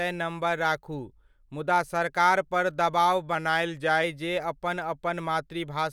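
Drift correction step, 3.35 to 4.04 s after "सरकारपर दबाव": speech slows 5.3% and sinks 94 cents, then snaps back, likely a one-step clock-matching rate change.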